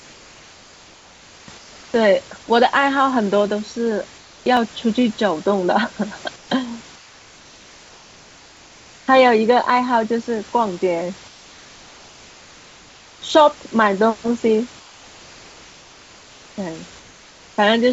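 Comfort noise in place of the background starts the clip, from 0.00 to 1.48 s and again from 1.58 to 1.94 s and 4.18 to 4.46 s. In each pause the real room noise, which sits about 26 dB below the speech, gives way to a smooth, featureless hiss roughly 2 to 3 dB quieter. The sending side stops transmitting when its detector finds no speech, and the receiving side synthesises a rough stand-in for the background; this is likely discontinuous transmission at work.

Dropped samples come next, at 4.57 s: a single sharp click where a fraction of a millisecond of audio is missing and the waveform jumps straight to a later value. The gap is far too short to lose any sound, so only the tick remains, likely a tiny slip in the buffering. It returns identically at 8.57 s, this time inside a stretch of comfort noise.

The comfort-noise swaps continue from 6.36 to 6.50 s, 6.96 to 9.08 s, 11.28 to 13.22 s and 14.80 to 16.58 s. 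Each time the background flattens and drops by about 2 to 4 dB, then the fuller room texture snaps back when the speech resumes. Throughout, the audio has nothing above 8 kHz, which fits a wideband call codec such as G.722.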